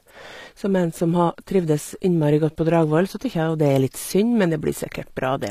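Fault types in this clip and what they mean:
HE-AAC compression: The speech is likely HE-AAC coded at a low rate, around 24 kbps, so the treble is rebuilt from copied lower bands rather than transmitted; that rebuilt top end sounds gritty and misaligned, plainly audible throughout, with nothing above 14.9 kHz.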